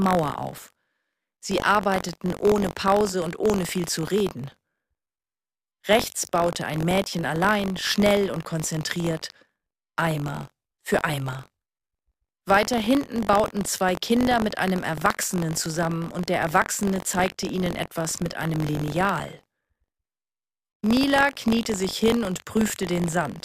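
From start to finish, the writing side of the audio ring buffer and the hardware reading it have slipped out of step, so they cross inside every period. This is buffer tearing. A small slice of each buffer, a few percent, holds audio from roughly 40 ms earlier, joined on hard at both edges. The result is a continuous robotic rattle at about 46.9 Hz, which fits a 1024-sample buffer, present wherever there is sound.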